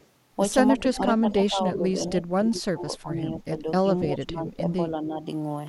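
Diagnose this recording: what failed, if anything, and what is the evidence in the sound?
Call processing at the far end is the likely culprit for the echo leak. A faint, delayed copy of the speech comes back at 0.00–0.06 s, at about 40 dB below the speech, and then more strongly at 0.78–0.97 s and 4.47–4.51 s, at about 20 dB down. Each time the delay is the same 288 ms. That fixed lag points to loudspeaker pickup that the echo canceller failed to subtract, rather than room reverberation, which smears into a diffuse tail instead of a distinct repeat.

Speech suppressed in double talk shows up between 0.72 and 5.24 s. The speech repeatedly sags in level, by around 15 dB at its deepest. These dips total roughly three seconds. The echo bursts at 0.78 s and 4.47 s fall inside this span, which likely ties it to both sides talking at once: the echo canceller, unable to separate the local talker from the returning echo, attenuated both. 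A network dropout would cut the sound to silence or leave concealment artefacts, not a dip in level.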